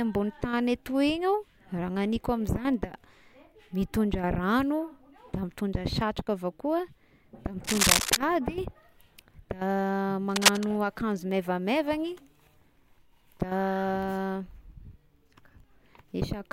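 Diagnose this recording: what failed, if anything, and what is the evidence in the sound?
A worn cable or connector in the analogue wiring was likely being moved, its contact resistance jumping erratically. The result is cable scratch noise: dense, ragged bursts of scratching, roughly 5 dB above the speech, from 7.63 to 8.17 s and again from 10.29 to 10.64 s.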